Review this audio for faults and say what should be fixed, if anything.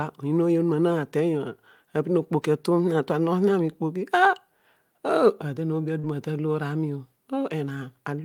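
Short concealed packet loss occurs at 5.99 to 6.05 s. About 40 ms of the call arrived too late for the decoder. The receiver filled the gap by extending the preceding sound, heard as a brief smear. A larger jitter buffer or forward error correction would prevent it.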